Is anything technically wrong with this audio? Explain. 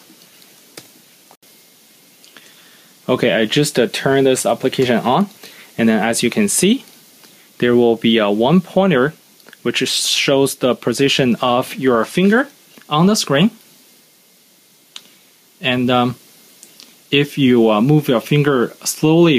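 Yes. Gain pumping runs through the whole clip: the gain is pulled down each time a loud sound arrives and recovers afterwards, swinging by roughly 5 dB. The likely cause is input gain set far too high for the microphone, with a fast limiter or compressor clamping down on each peak and releasing in the pauses. Loud and quiet passages sit unnaturally close in level, giving a squashed, breathing quality.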